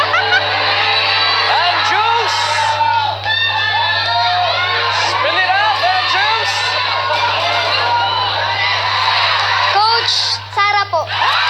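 No technical faults can be heard anywhere in this audio.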